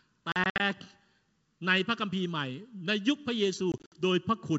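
Packet loss on an ADPCM call hits at 0.32 to 0.61 s, where about 140 ms of speech vanishes in hard-edged gaps scattered over 280 ms, the longest 60 ms. It returns at 3.72 to 3.93 s, with about 120 ms lost over 200 ms, again with runs of up to 60 ms. Each burst drops several packets to silence. The decoder's adaptive predictor and step size then drift out of step with the sender's, so the speech comes back with some distortion before it settles.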